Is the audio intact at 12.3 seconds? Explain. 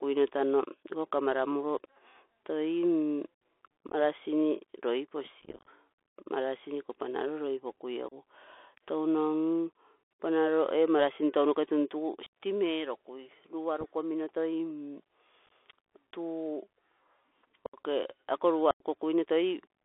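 No. Right after "ee marasin tounoke tuntugu", from 12.26 to 12.30 s, the speech drops into an abrupt hole with hard edges. This is unconcealed Bluetooth headset packet loss: about twenty tiny voice packets between headset and phone never arrived, and silence or an idle pattern filled their slots.

Under that gap, as across the whole clip, the speech is narrow, scratchy on sibilants, and carries a grainy hiss, with nothing outside roughly 300 Hz to 3.5 kHz. This is the Bluetooth CVSD headset codec, which sends one up-or-down bit per sample at 64 kbps and can't track sharp changes cleanly.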